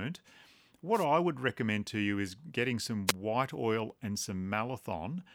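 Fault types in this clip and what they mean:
Wireless microphone noise hit: the radio link from an analogue FM microphone briefly faded as reflected signals cancelled at the receiver, so receiver noise rose over the speech. It sounds like a short swish of static, first from 0.93 to 1.06 s just before "would recommend to you", then a shorter burst from 3.07 to 3.12 s between "to you is getting" and "white oil and".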